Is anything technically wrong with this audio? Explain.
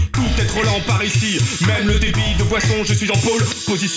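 No, nothing technically wrong can be heard anywhere in this audio.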